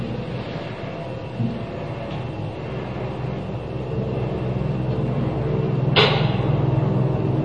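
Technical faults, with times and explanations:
Throughout: MP3 compression. Nothing is heard above 9.3 kHz, and a watery, swirling texture with smeared attacks is plainly audible, likely from an MP3 encoder short of bits, which fits a rate around 32 kbps. Unlike a simple low-pass filter, faint detail flickers in and out.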